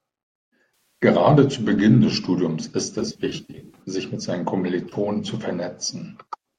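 AAC frame loss with concealment shows up at 1.02 s, where about 150 ms of dropouts scattered over 260 ms, in runs of at most a few tens of milliseconds, leave a smeared, phasey patch as the decoder rebuilds the missing stretches from the last good spectrum. It happens again from 2.99 to 3.81 s, just before "sich mit seinen". About 410 ms is lost across 800 ms, in short runs of up to roughly 50 ms, so the concealment produces recurring noisy smears. A final, brief 30 ms gap at 4.89 to 4.94 s, right after "sich mit seinen", is a short noisy blip. Throughout, the audio also carries light low-delay AAC compression, likely AAC-ELD at 64 kbps.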